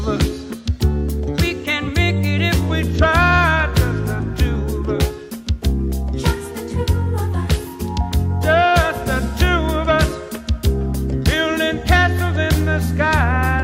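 From 0.69 to 2.70 s the samples are clocked out faster than they were captured, with no rate conversion in between: a wrong sample rate fault. The shift matches audio made at 44.1 kHz being played as if it were 48 kHz. Because speed and pitch are tied together, the sound runs 1.09 times too fast and rises by 1.47 semitones, so that stretch comes across as slightly hurried and sharp.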